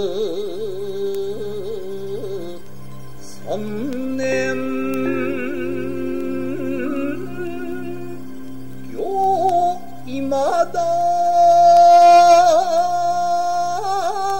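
Word clock ticks run from 0.14 s to 14.30 s: sharp, uneven clicks recurring roughly every third of a second, about fifty in all. The receiving device is running on its own clock rather than locking to the sender's digital stream, so the two drift apart. A drift of roughly 70 parts per million fits this tick rate. Each time the clocks slip past each other the data is briefly misread, which fits a single sample being dropped or repeated, and that produces each tick.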